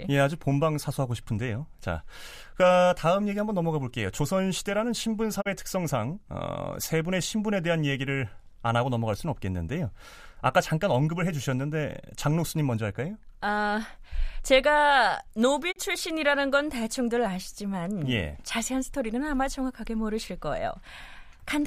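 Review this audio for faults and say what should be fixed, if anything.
Two digital broadcast dropouts break the speech, from 5.40 to 5.48 s and from 15.71 to 15.78 s. In each, the sound fades to silence over about 20 ms, stays muted, and comes back after roughly 70 ms. The missing stretch of about 32 ms suggests a single lost frame. The receiver muted when the signal was lost or a frame failed its checksum, and that audio is gone. Improving reception or adding error protection on the transmission link would prevent it.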